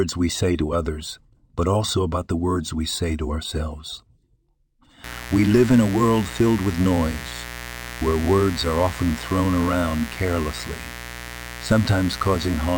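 From 5.04 s to the end of the clip, a mains buzz sits under the speech: a steady, raspy tone built on 60 Hz with harmonics climbing well up into the kilohertz range, at roughly 15 dB below the speech. The edge comes from sharp switching spikes, twice per mains cycle, entering the signal path through something like a dimmer, a rectifier or an unshielded run, rather than a clean sinusoidal hum.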